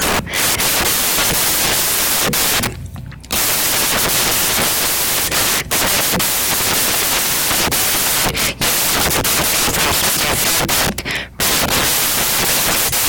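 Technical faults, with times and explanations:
Throughout, samples built from the wrong bytes: each sample's bytes are assembled in the wrong order or offset. So the rapidly changing low-order bits land in the most significant position. The speech carries loud, harsh broadband noise, close to white on the louder sounds.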